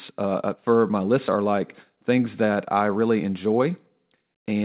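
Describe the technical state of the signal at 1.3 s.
At 1.3 s there is a skip ahead, from 1.28 to 1.30 s. Roughly 0.7 s of speech was dropped while later audio was already queued. Playback jumps forward with no gap filled. The two sides join almost directly, so the speech lurches abruptly.

Right after, from 1.38 to 4.11 s, a jitter buffer speed-up follows. The buffer now held too much delay. It repeatedly trimmed short pitch-period pieces, about 0.3 s in total. Speech runs at 109% speed with unchanged pitch and sounds hurried, still band-limited at 4 kHz.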